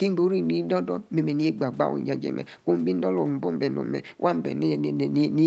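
No technical faults can be heard in this speech.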